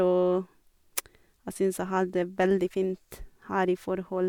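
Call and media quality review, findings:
No audible faults found.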